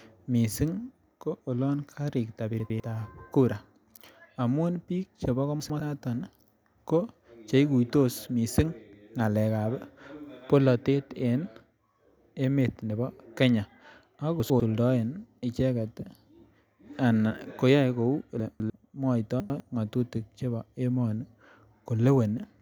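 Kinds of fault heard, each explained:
Chunks out of order: a 100 ms block of the speech reached the output one block late, or two blocks late once, so it played after audio that should have followed it. Nothing is missing, but each swap leaves about 0.2 to 0.3 s of jumbled sound with three hard joins, at 2.6, 5.6 (just after "amun biik chebo"), 14.4, 18.4 (after "ana koyoe kou", two blocks late) and 19.4 s.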